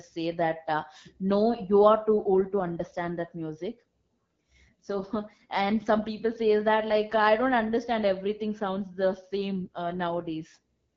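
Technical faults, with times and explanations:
Throughout, AMR wideband (HD Voice) codec: the speech sounds rough and raspy, which fits the low 8.85 kbit/s mode. The codec models the voice from pulses up to 6.4 kHz and fakes the band above with shaped noise, so too few bits leave obvious grit.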